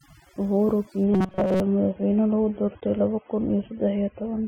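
Speech with overdone noise removal throughout: a noise reducer set far too hard has pulled individual frequency bands down whenever they sat near its noise estimate, so the gaps fall to near silence with twinkling specks, and a spectrogram shows isolated blips scattered over a black background. From 1.04 s to the end, the sound switches abruptly to an adaptive stream at a lower bitrate, with no gap. Codec artefacts thicken. Between 1.14 and 1.6 s the voice becomes a rigid metallic buzz at 188 Hz, the robotic sound from repeated short buffers. Its likely cause is that each repeat lasts about 5.3 ms, so most of that span is looped audio. A spectrogram shows evenly spaced harmonic lines of 188 Hz, and the waveform shows a short cycle repeating.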